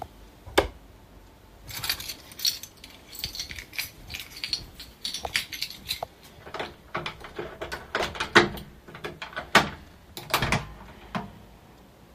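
No technical faults can be heard anywhere in this audio, so there is nothing to place in time order.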